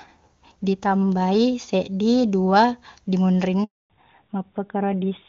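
A call recording of speech in which the network handed the call over: during this handover gap no frames arrived, so the speech cuts out from 3.64 to 3.90 s, leaving 260 ms of silence. When the link resumes, the call has made a fallback to narrowband, dropping from what sounds like HD Voice wideband coding to a narrowband codec, so from 3.90 s to the end nothing above 4 kHz remains and the speech sounds duller and rougher than before the gap.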